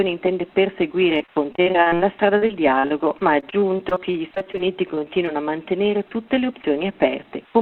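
From 1.15 to 2.01 s and again from 2.37 to 5.29 s there is repeated packet loss with a robotic sound. Successive gaps of up to 39 and 45 ms are patched by extending the preceding sound, which leaves a choppy texture with fragments missing. The damage is densest in the first stretch. Between 5.96 and 6.60 s a jitter buffer speed-up cuts around a tenth of a second by removing short pitch-period slices, so the audio plays about 12% fast at unchanged pitch and sounds hurried.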